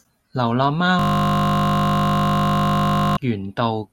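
Speech, with a system hang loop from 0.99 s to 3.17 s. The same 20 ms piece of audio repeats exactly, roughly a hundred times. The speech stops and a steady 50 Hz buzz takes over. The driver froze while the hardware kept cycling its buffer.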